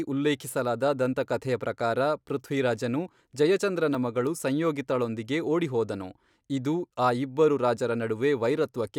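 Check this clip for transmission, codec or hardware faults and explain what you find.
One hardware-side fault is present: a dropped buffer (overrun) at 3.95 s, between "ದಂತಕಥೆಯ ಪ್ರಕಾರ ಪೃಥ್ವಿರಾಜನು ಜಯಚಂದ್ರನ" and "ಮಗಳು ಸಂಯೋಗಿತಾಳೊಂದಿಗೆ ಓಡಿಹೋದನು ಇದು". The likely cause is the recording software falling behind, so the capture hardware overwrote a block of samples before it was read. Only a millisecond or two of the speech disappears, and the audio on either side is butted straight together with no gap, producing a tiny forward jump rather than any audible silence.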